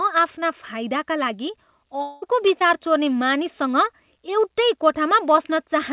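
At 2.02 s the sound gives way to a synthetic continuation that lasts until 2.24 s. The last sound is stretched into a buzz or hiss that fades, and the real audio resumes later without the lost portion. This is likely a long network dropout, with about 0.2 s of audio missing and filled rather than left silent. On a spectrogram the harmonics flatten into smeared, repeating bands that blur toward noise. The waveform shows a decaying, periodic-looking envelope instead of natural variation.

Right after, from 2.24 to 2.27 s, and again from 2.59 to 2.63 s, short concealed packet loss replaces about 20 ms of audio each time. Each is heard as a brief smear or wobble where the receiver extended the previous sound and blended back in. On a spectrogram these appear as thin vertical smudges where the fine detail briefly repeats. In the waveform the cycles look copied before blending back into the real signal. 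The whole clip stops sharply at 4 kHz, which fits a narrowband telephone codec such as G.711 A-law.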